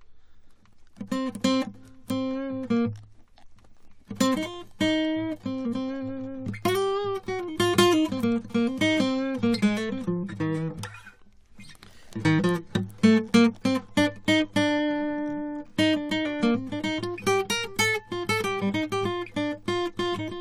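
No technical faults can be heard anywhere in the music, so there is nothing to describe in time order.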